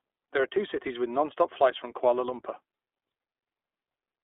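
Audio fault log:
Throughout: iLBC codec. The speech is confined to a band of 300 Hz to 3.6 kHz, with nothing above. It carries a plainly audible rough, synthetic edge because the excitation in each short frame is coded independently, which fits 20 ms frames at 15.2 kbps.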